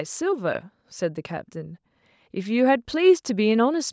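No technical faults are audible.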